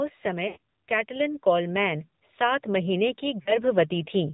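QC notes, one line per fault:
Throughout: AMR narrowband mobile codec. Nothing above 4 kHz survives. The speech sounds buzzy and synthetic because a vocal tract model driven by sparse pulses rebuilds it. The damage is plainly audible, which fits a low 7.4 kbps mode.
0.22 to 4.29 s: automatic gain rising. The level climbs slowly by about 8 dB across nearly the whole clip. Speech and background swell together because the gain control judged the input too quiet and kept raising it.
0.48 to 0.57 s and 3.42 to 3.57 s: lost AMR speech frames. The sound smears and sags, then recovers weakly. The gaps last 80 ms and 40 ms, which fits runs of four and two 20 ms frames. The decoder repeated old settings with falling gain.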